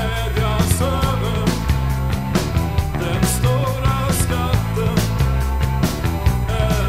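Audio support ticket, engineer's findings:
USB whine, present throughout. Fixed-pitch tone on a 1 kHz fundamental with a harmonic series, strongest component at 18 kHz, roughly 25 dB below the wanted signal. Probable component: USB power or ground path, with the bus's 1 ms frame current draw leaking into the analogue side. Spectrogram: steady horizontal lines spaced 1 kHz apart, brightest at 18 kHz. Waveform: fine periodic ripple riding on the signal.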